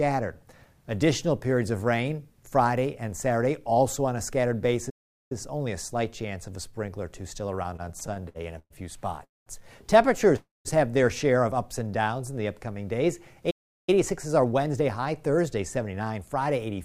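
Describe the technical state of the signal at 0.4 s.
At 0.4 s the signal is intact, with no fault present at that moment.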